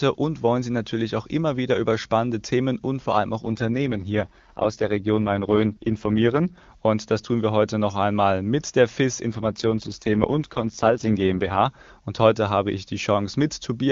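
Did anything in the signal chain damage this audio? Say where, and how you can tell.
Yes. An AMR rate drop at the codec stage, driven by the network, is audible from 3.41 to 6.58 s and again from 9.32 to 11.66 s. In both stretches the speech turns rough, raspy and synthetic, which fits a step down from the clear 23.85 kbit/s wideband mode to about 6.6 kbit/s, with the freed bits spent on error protection. Unlike packet loss or a fallback to narrowband, the band stays full and nothing drops out.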